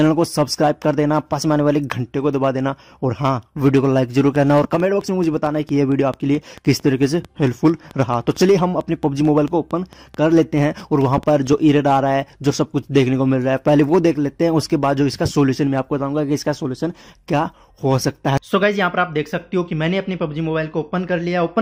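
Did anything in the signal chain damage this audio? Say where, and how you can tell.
Yes. From 4.36 s to 11.92 s a train of clicks runs at a regular 4.5 per second, around forty similar pops at about the level of the sound itself, audible in pauses too. The likely source is interference coupling into the analogue wiring.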